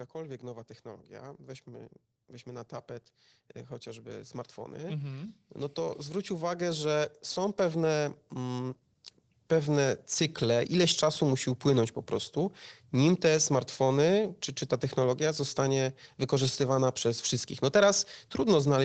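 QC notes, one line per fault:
3.83 to 8.77 s, automatic gain rising: the gain control judged the speech too quiet and raised its gain slowly, by about 9 dB, so voice and background noise swell together. The waveform envelope widens steadily, and the spectrogram brightens evenly up to the 8 kHz call bandwidth.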